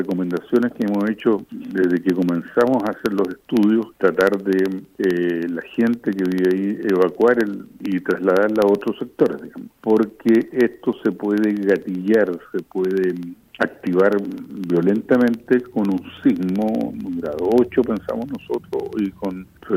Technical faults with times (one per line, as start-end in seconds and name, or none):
0.05-19.70 periodic USB or driver dropouts